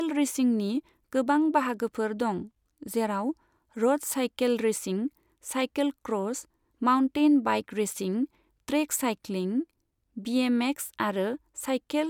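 Speech recording, with no technical faults to report.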